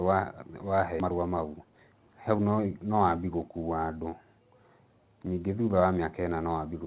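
At 1.00 to 1.02 s the speech performs a skip ahead. Roughly a second of audio is missing, discarded while later audio already sat waiting, so playback lurches forward with no filler and the two sides of the cut are spliced almost directly. A waveform shows an abrupt seam with no silent gap. On a spectrogram the harmonic tracks and formants break off and restart at different positions, like a torn frame.

Right after, from 1.05 to 2.75 s, comes a jitter buffer speed-up. With the buffer holding more than it wanted, the receiver trimmed one or a few pitch periods at a time, over and over, pulling out about 400 ms and running the speech at 123% while the pitch stays put. It sounds rushed. On a spectrogram the syllables sit compressed in time with unchanged harmonic spacing, and a waveform shows tighter cycle groups. Throughout, nothing appears above 4 kHz, consistent with a 64 kbps G.711 mu-law call path.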